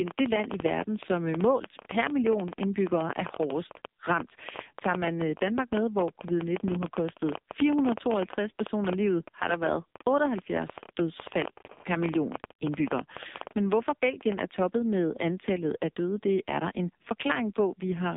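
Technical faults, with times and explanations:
Throughout, AMR narrowband mobile codec: speech squeezed into a 200 Hz to 3.7 kHz band at 5.9 kbps, so it's heavily buzzy and synthetic, with nothing above 3.7 kHz.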